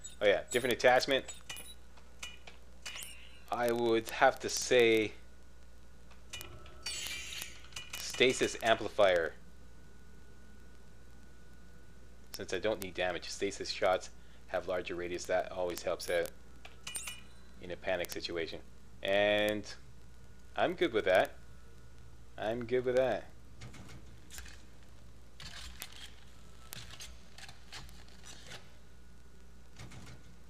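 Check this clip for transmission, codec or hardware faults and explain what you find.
Word clock ticks run from 0.10 s to the end of the clip at about 30.5 s. The receiving device is clocked independently of the digital source, and the two clocks disagree by something around 700 ppm. As they slip past each other, a single sample is dropped or repeated and its neighbours are misread, roughly every 30 ms. That gives about a thousand sharp ticks at a steady rate of about 33 per second, varying in strength.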